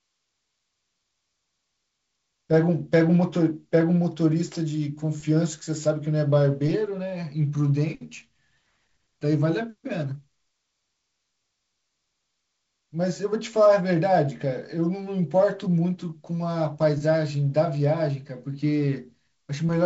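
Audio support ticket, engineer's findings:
No faults found.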